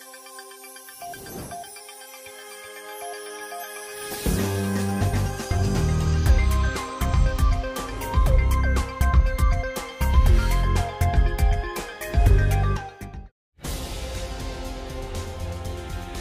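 No technical faults can be heard anywhere in the signal.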